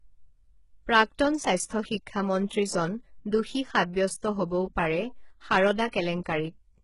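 HE-AAC compression runs through the whole speech recording. The treble sounds rebuilt rather than captured, as if copied up from lower bands. Sibilants come out gritty and lispy, nothing survives above 11.1 kHz, and the heavy damage fits a very low bitrate around 12 kbps, likely from this codec.

Pre-echo appears from 5.88 to 5.93 s, a 54 ms smear of hiss just before a sharp attack. The codec spread quantisation noise across its whole block, so noise meant for the loud onset leaked into the quiet instant ahead of it, softening the attack.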